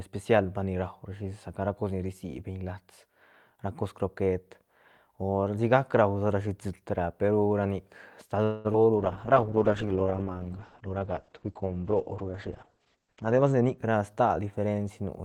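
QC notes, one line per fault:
8.43–8.67 s call audio freeze: the sound stretches into a fading buzz for about 0.21 s, then resumes intact, likely delayed packets; unlike concealed loss, nothing goes missing.
8.73–8.76 s short concealed packet loss: a brief smear or wobble where about 20 ms never arrived and was patched from the preceding sound, so content is lost.
8.97–13.83 s call bitrate drop: encoding falls from 40 to 9 kbps and bandwidth from 20 kHz to 8 kHz, giving coarse, watery, muffled sound rather than a simple treble cut.
12.82–14.40 s jitter buffer speed-up: audio runs at 113% speed with pitch unchanged, as repeated pitch-period cuts trim about a fifth of a second of excess buffering.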